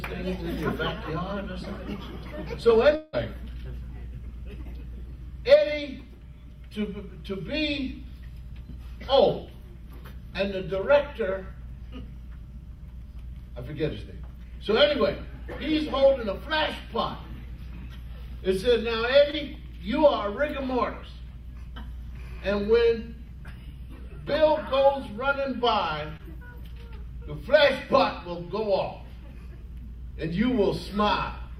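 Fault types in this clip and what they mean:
Long network dropout: From 2.95 to 3.15 s the sound stops moving forward and the last moment is drawn out as a smeared, fading continuation. That stretched tail covers almost the whole gap, with no audible silence. About 0.18 s is missing, and the audio picks up afterwards without it. The likely cause is a run of consecutive lost packets that the receiver papered over by extending what it had last decoded.
Short concealed packet loss: At 19.31 s and again at 26.17 s a brief blur, like a tiny wobble, replaces the real signal. Each time roughly 20 ms never reached the decoder in time. The receiver filled the hole with about 20 ms of synthesized continuation built from the preceding sound, then crossfaded back into the genuine audio, so each event passes in a few hundredths of a second.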